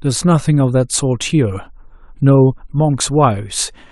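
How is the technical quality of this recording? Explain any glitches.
Nothing here sounds wrong on the technical side; there are no glitches, dropouts or other problems to point to anywhere in the recording.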